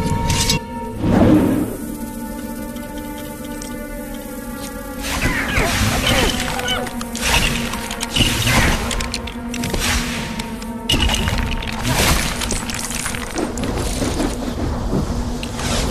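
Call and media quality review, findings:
Damaged data in a compressed stream: short glitch at 0.56–0.58 s and at 6.88 s. Probable component: decoder input. Corrupted bytes make frames unreadable, so the decoder loses sync and outputs garbage briefly while seeking the next valid frame header.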